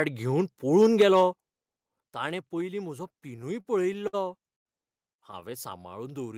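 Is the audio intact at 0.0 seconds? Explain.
Yes, the speech at 0.0 seconds is intact, with no audible fault at that moment.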